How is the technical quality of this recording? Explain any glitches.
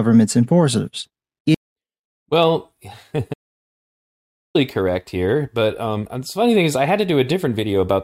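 The recording has one audio dropout to silence, from 3.34 s to 4.55 s. The input feeding the recorder was likely lost for that stretch, through a disconnected device, a failed link or a stray mute, while the recording carried on writing silence. The speech breaks off mid-flow, and for about 1.21 s there is dead silence with no room tone. It resumes abruptly on "correct here but um". Whatever was said during the gap is gone.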